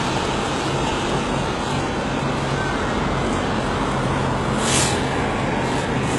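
From start to finish, the sound carries heavy damage that points to HE-AAC compression. The likely cause is a very low bitrate, which fits roughly 12 kbps. Nothing reaches above 11.5 kHz. The lower band is coded directly. The treble above it is rebuilt by copying lower bands upward under a coarse envelope. That top end stays bright but is synthetic. Its harmonics do not align with those below. High content sounds gritty and metallic.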